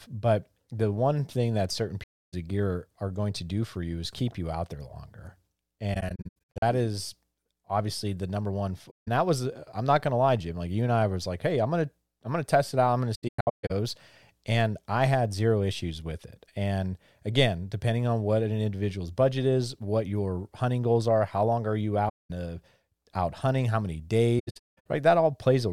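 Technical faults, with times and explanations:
2.03–2.34, 5.94–6.63, 8.90–9.08, 13.15–13.71, 22.08–22.31 and 24.39–24.86 s: AAC frame loss with muting. The decoder zeroed the missing frames, and overlapping windows taper the sound out and back in. On a spectrogram these show as soft-edged blank columns, and on the waveform as tapered flat gaps. The 5.94, 13.15 and 24.39 s stretches break into several short holes.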